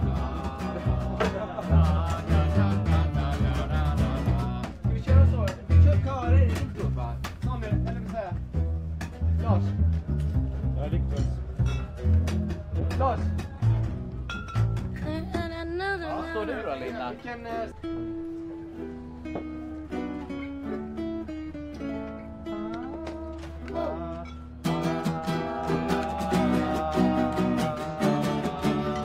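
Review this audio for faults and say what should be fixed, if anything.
From 12.81 to 14.43 s the sound turns rough, watery and dull. This is a call bitrate drop: the encoder, seemingly cut from about 128 to 15 kbps, coded coarsely and shed high frequencies. To prevent it, set a higher minimum encoder bitrate and smooth the bandwidth estimator so brief network dips don't starve the codec.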